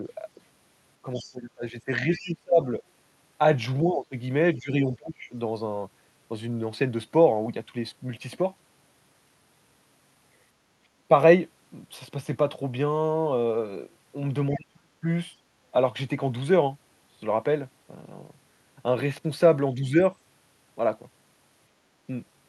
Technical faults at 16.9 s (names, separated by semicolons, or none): none